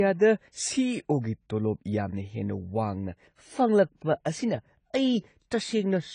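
Right through the speech, nothing gets above 10 kHz and there's audible smearing and a fizzy edge, likely AAC compression at a low bitrate, something like 24 kbps.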